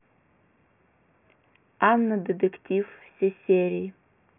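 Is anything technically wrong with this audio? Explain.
No, nothing in this speech recording points to a technical fault. There are no dropouts, glitches or other defects to point to anywhere in the audio.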